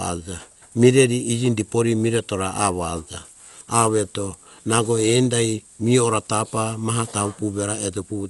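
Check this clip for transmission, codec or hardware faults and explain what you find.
The speech carries audible codec damage from start to finish, most likely from Dolby Digital compression. Nothing is present above 11.5 kHz, so the top is dull. Around tonal parts there is a rough, fluttering noise, which fits a low bitrate near 64 kbps. At that rate the encoder narrows the band and leaves many frequency lines without mantissa bits, and the decoder fills them with dither noise. That noise fill separates it from a plain low-pass filter, which would sound dull but smooth.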